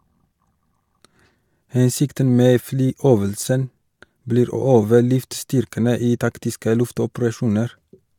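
No technical faults are audible.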